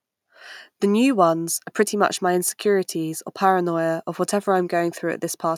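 No technical faults can be heard anywhere in this speech recording. There is nothing in the audio to point to or time.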